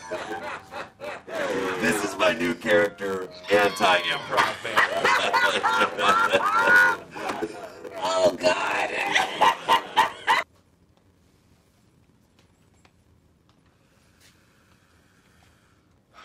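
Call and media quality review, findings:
Block size mismatch (padded), throughout. Steady 93.8 Hz buzz. Audio runs at 0.861x speed, timbre unchanged. Short writes zero-filled to fit what sounds like 512-sample reads.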